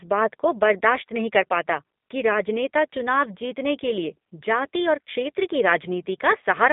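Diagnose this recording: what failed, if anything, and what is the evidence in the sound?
The speech passed through a G.729 codec for its whole length. It sounds thin and slightly rough. Nothing reaches above about 3.6 kHz or below 200 Hz. The coder rebuilds each frame from a vocal tract filter, pitch predictor and sparse pulses, which fits an 8 kbit/s G.729A coder.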